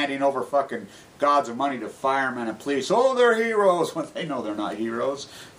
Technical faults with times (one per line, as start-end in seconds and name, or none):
none